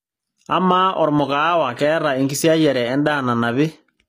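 From start to finish the speech carries plainly audible codec damage, likely HE-AAC compression: the top end is rebuilt from copied lower bands rather than coded, so s sounds come out gritty and metallic, with nothing above 15.5 kHz, which fits a low bitrate around 24 kbps.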